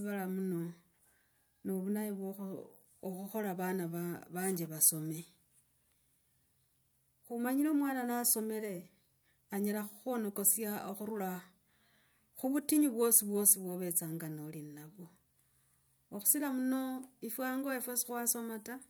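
No technical faults turn up anywhere in this recording.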